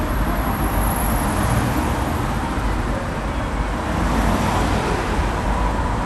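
Throughout, nothing reaches above 12.2 kHz, and a gurgling, granular grain comes as upper sub-bands flicker out, unlike MP3's watery swirl. This is likely MP2 compression, fitting roughly 80 kbps.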